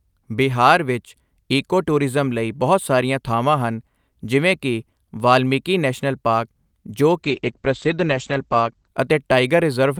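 Speech, with a call bitrate drop from 7.24 to 8.95 s. The sound turns rough and watery, and the top end disappears. The bandwidth falls from about 20 kHz to 8 kHz, so sibilants lose their crispness. This fits the encoder moving from around 48 kbps to around 10 kbps after the call's bandwidth estimate fell. At that rate Opus codes coarsely and drops high frequencies. The worst stretch lasts about 1.65 s before quality recovers.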